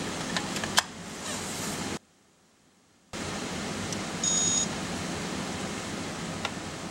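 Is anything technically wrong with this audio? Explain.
Yes, there's one problem. From 1.97 to 3.13 s the sound drops by about 28 dB, background included, leaving only a small residue. That's likely one channel inverted: with one side's polarity flipped, whatever both channels share cancels when they're summed to mono.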